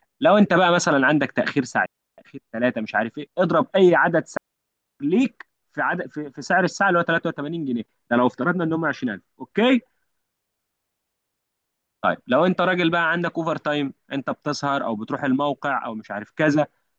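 Two digital wireless dropouts mute the speech at 1.86 s for 0.32 s and at 4.37 s for 0.63 s. Each time the receiver lost too much data, faded almost instantly, and left a clean, noiseless hole. On a waveform or spectrogram the hole is a flat, blank gap with sharp edges.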